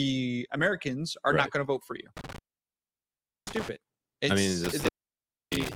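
The sound drops out twice with crackle at each edge, first between 2.17 and 3.69 s for about 1.09 s, then from 4.64 s to the end for about 0.63 s, leaving only faint hiss. This is intermittent contact: a loose cable or plug briefly breaking the signal path.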